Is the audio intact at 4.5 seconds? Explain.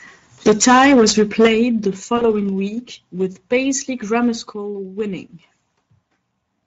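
No. Right around 4.53 s the level drops suddenly by about 4 dB, with the speech and the background noise stepping down together in one go. That's a microphone volume step-down, likely the call software deciding the input was running hot and lowering the mic's input gain in a single jump. Since everything shifts by the same amount at once, it reads as a level change rather than the talker getting quieter.

That moment also carries the Speex codec damage that runs through the whole clip, and it's plainly audible. Speex is a CELP coder that rebuilds the speech from a small budget of excitation bits, so the result comes out noisy and hoarse. Anything up in the high band is a shaped, hissy fill rather than real detail. The amount of damage fits a mid-range setting of around 16.8 kbps.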